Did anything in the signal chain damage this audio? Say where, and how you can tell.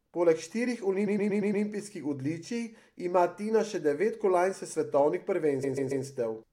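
Yes. The compressed stream was damaged at the codec or storage stage: a short block of encoded frames was written or delivered more than once, so the decoder played the same slice of speech again. This is repeated frames. From 1.06 to 1.64 s, a 116 ms block loops five extra times, adding 0.58 s. From 5.63 to 6.04 s, a 139 ms block loops three extra times, adding 0.42 s. Both are heard as a mechanical stutter that lengthens the speech.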